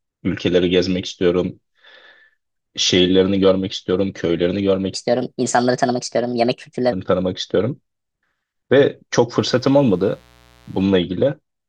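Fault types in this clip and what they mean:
Section at the wrong speed: From 4.94 to 6.92 s the speech runs 1.31 times too fast. The voice turns hurried and high, raised by roughly five semitones. Speed and pitch jump together at the start of this stretch and drop back together at its end. The cause is likely a section played back or resampled against the wrong clock. Because both change at once, this is not a pitch effect. It is playback at the wrong rate.
Mains buzz: From 9.36 to 10.86 s a steady, raspy buzz sits under the speech. Its base is 60 Hz mains. Sharp switching spikes, twice per cycle, build a dense ladder of harmonics reaching into the kilohertz range. That gives it an edge rather than a plain hum. It is faint, roughly 35 dB below the speech.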